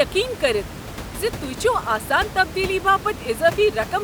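No technical faults are audible.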